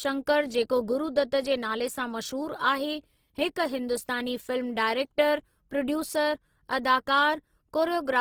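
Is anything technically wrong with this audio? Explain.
Yes. Throughout the speech, Opus compression is likely at work: with too few bits, the encoder fills bands with folded or noise-like energy, so the speech sounds grainy and rough. It lacks MP3's swirling holes, and the full bandwidth reaches about 20.2 kHz, at a low bitrate near 16 kbps in music mode.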